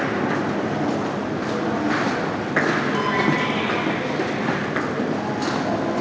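No faults found in this everyday-sound recording; the call path behaves as expected, with nothing above 8 kHz, which fits a wideband codec such as G.722.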